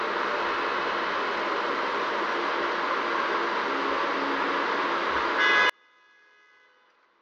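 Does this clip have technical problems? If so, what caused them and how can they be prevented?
Yes. From about 5.70 s right through to the end at 7.22 s, the sound collapses, dropping by about 39 dB so that only a faint trace remains. That's the classic signature of one channel inverted, likely with the two channels then summed to mono. With one side's polarity flipped, everything common to left and right cancels, and you're left hearing just the small difference between them. To prevent it, check polarity on both channels and do a mono-sum check before delivery.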